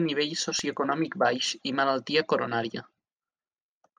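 A scratch or blemish on the disc surface has destroyed more data than the error correction can rebuild, so this speech clip carries CD scratch ticks: three brief ticks between 0.59 and 1.07 s, each under a millisecond, where the player patched over missing samples just before "baix i malaltia coronària".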